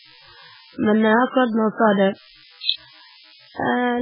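Throughout the clip, a nearby DECT cordless phone or base station is transmitting a short radio burst every 10 ms, and the audio circuitry is rectifying that energy into the signal path. The result is DECT cordless phone buzz: a steady, thin buzz pulsing at 100 Hz and rich in harmonics, sitting roughly 30 dB below the speech.

Running across the same stretch is heavy damage that points to MP3 compression, likely at a very starved bitrate of around 8 kbps. With so few bits, the encoder has cut the treble off completely: nothing is left above 5.2 kHz, so the speech sounds dull and muffled. Weak frequency components are being dropped and restored from frame to frame, giving the speech a watery, swirling texture, and the onsets of sounds come across smeared rather than crisp.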